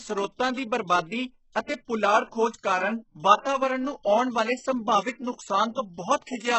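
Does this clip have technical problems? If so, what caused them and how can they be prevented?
Yes. Throughout the clip the speech carries heavy coding damage: the treble sounds synthetic, s sounds come out gritty or lispy, and nothing survives above 8 kHz. This is likely HE-AAC compression at a very low bitrate, around 8 kbps. The codec kept only the lower spectrum and rebuilt the upper band by copying lower bands upward under a coarse envelope, so the harmonics there no longer match the original. To prevent it, encode at a higher bitrate or use a lossless format.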